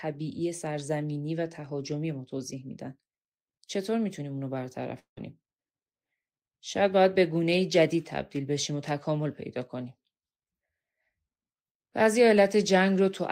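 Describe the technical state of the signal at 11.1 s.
The speech signal at 11.1 s is intact, with no audible fault at that point.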